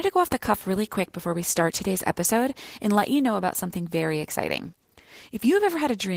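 Throughout the speech, Opus voice compression leaves plainly audible damage: a hoarse, slightly robotic voicing from coarsely coded excitation, fitting a bitrate around 16 kbps in hybrid mode. Unlike a simple low-pass, the grit sits inside the voice itself.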